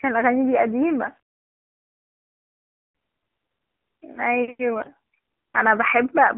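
Throughout, the speech carries AMR narrowband mobile codec coding: the band runs only from 200 Hz to 3.5 kHz, and the voice has a buzzy, synthetic edge that fits a low rate of about 7.4 kbps. Unlike a plain telephone band-limit, the timbre itself sounds modelled rather than merely muffled.

From 0.87 to 2.95 s a fine grain rides on the signal. It sounds like low bit depth without dither, with the likely cause being rounding to around 9 bits. The grit sits roughly 50 dB below the signal and rises and falls with it, unlike steady hiss, which would persist through pauses.

At 4.82 to 4.89 s the voice briefly turns hoarse and gargly while keeping its pitch and level. These are AMR bit errors corrupting the finer codec values, in a burst that fits about three frames. Unlike a dropout or a concealed lost frame, the sound never goes silent or repeats.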